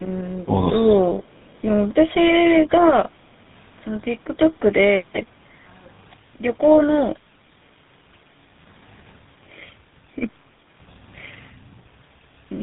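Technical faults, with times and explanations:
Throughout: tandem speech coding. The speech sounds rough, muffled and warbly, with nothing above 3.8 kHz. The call was decoded and re-encoded at each link border. GSM full rate at 13 kbit/s sits at both ends, with CVSD in between and G.711 carrying the call between them. That makes three speech coders in a row. Each one works on the already damaged output of the one before, so their losses add up.
0.45 to 0.61 s: speech suppressed in double talk. The voice dips by roughly 10 dB, for about a tenth of a second in total. This points to both sides talking at once. The echo canceller then likely failed to tell the near talker from loudspeaker echo. It turned everything down, so the talker's own speech was briefly pulled down with it.
1.37 to 1.57 s: echo leak. A faint delayed copy of the speech appears, about 318 ms behind the original. It is very quiet, around 40 dB below the speech, and brief. 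The likely cause is a far end playing the call on a loudspeaker. Its echo canceller did not remove all of what the microphone picked up. The leftover was sent back down the line.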